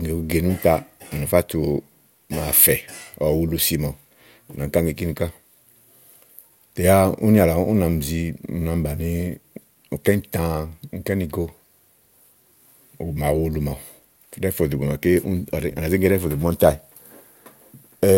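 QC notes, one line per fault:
No faults found in this speech clip. Nothing heard calls for a QC entry.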